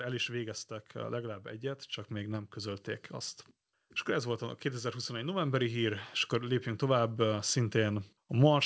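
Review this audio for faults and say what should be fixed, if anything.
From 4.1 s to 8.1 s the speech and the background noise swell together by about 8 dB. This is automatic gain rising: the automatic gain control judged the input too quiet and raised its gain slowly over those four seconds, lifting the noise floor along with the speech. Setting the microphone input level correctly at the source, and limiting how far and how fast the gain control can boost, would prevent it. The absence of content above 8 kHz fits a wideband call codec such as G.722 and is not a fault.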